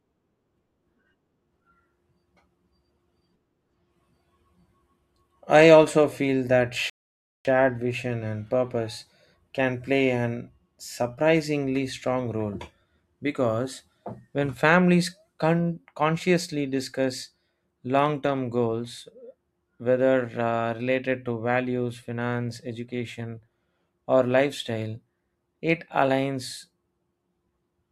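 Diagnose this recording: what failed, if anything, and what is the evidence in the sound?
Playback stall at 6.90 to 7.45 s: the speech cuts out for about 0.55 s after "I also feel that", resuming with "vision and purpose can", likely the player starving for data.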